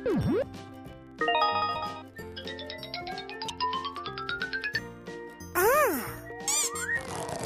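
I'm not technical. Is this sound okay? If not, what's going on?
No. Two things are wrong.

The first is a filter restarted on every block. Somewhere in the processing chain, a filter forgets what it was doing each time a new chunk of audio arrives and starts over from scratch. Each restart leaves a tiny tick, and because the restarts happen about 21.5 times a second, the ticks merge into a low, steady buzz under the sound for the whole clip. The buzz gets louder when the sound gets louder. That rate fits chunks of 2048 samples.

The second is compressed frames skipped. The audio was stored in a compressed format, and at two points the player dropped small pieces of it, either because they were missing or because they looked damaged. The sound jumps forward by a split second, roughly 70 milliseconds between 2.21 and 2.23 seconds and roughly 50 milliseconds at 3.49 seconds.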